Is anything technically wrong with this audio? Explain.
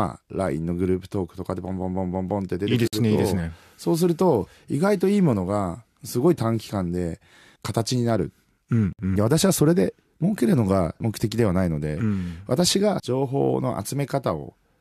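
Yes. A gap at a join of encoded pieces occurs at 2.88 to 2.93 s (about 52 ms) and again at 8.93 to 8.99 s (about 60 ms), six seconds apart, which fits segments encoded one by one and butted together. Each encoder pass left its start-up delay and end padding in place, so the speech drops into a brief hole with smeared edges, then resumes exactly where it stopped.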